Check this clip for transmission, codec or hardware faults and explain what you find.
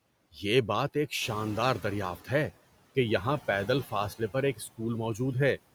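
Three faults from the noise suppressor show up in this speech clip.

Noise suppressor artifacts run through the whole clip. The suppressor is pulling down the frequency bands it judges to be steady background noise, frame by frame, by about 17 dB. As a result, the background rides up and down with the speech, sinking in the pauses and surfacing beneath the talking.

Noise suppressor catching up occurs from 1.21 to 2.45 s, after "یہ بات ایک" and before "کہ یہاں". The room noise jumps by about 11 dB at around 1 s, to about 18 dB under the speech. The suppressor's noise estimate still reflects the quieter level, so the louder background passes through with only about 9 dB of reduction. Over roughly 1.24 s the estimate adapts, and the background audibly settles back down to its suppressed level.

Speech cut by the noise suppressor happens between 4.56 and 4.8 s, just after "پر ایک". For about a tenth of a second within that span, the suppressor treats part of the speech as noise and lowers it along with the background, by up to about 15 dB at its deepest. 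The affected sound seems swallowed, dropping faintly out of the phrase before the level returns.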